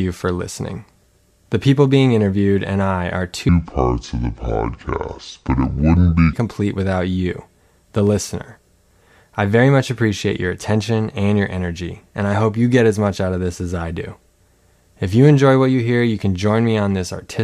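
From 3.49 s to 6.33 s, just after "interviewed and I are", a section at the wrong speed plays at 0.633 times normal, likely from a clock mismatch. The speech drags and drops about seven semitones. Unlike a pure pitch shift, timing slows too, until "complete without you the".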